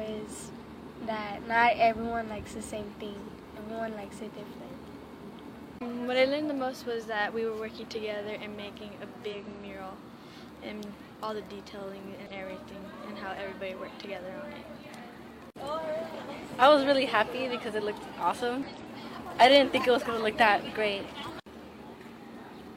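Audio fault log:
0.61–0.65 s, 3.53–3.59 s, 9.29–9.35 s, 12.26–12.32 s, 18.63–18.68 s: damaged data in a compressed stream. Corrupted bytes make the decoder misread those frames and lose sync until it finds the next valid frame header, leaving a brief chirp, squawk, click or short hole of roughly 40 to 60 ms each time.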